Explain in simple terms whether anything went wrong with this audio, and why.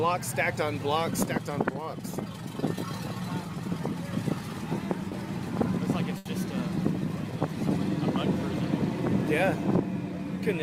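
Two things go wrong, both from audio arriving late or not at all over a network connection.

Around 5.09 to 5.13 s there's a short concealed packet loss. About 20 ms of audio never made it in time, so the receiving end guessed at it by stretching out the sound that came just before, then eased back into the real thing. You hear it as a tiny smear or wobble, and anything very brief in that moment can simply disappear.

Then at about 6.17 to 6.27 s comes a burst of packet loss, a bigger hole of roughly 80 ms. Here the receiver had to keep inventing for longer, carrying the last sound forward while fading it down, so it comes out as a short held buzz or a hiss that dies away. When the audio picks up again, it has jumped ahead, and whatever was in that gap is gone for good.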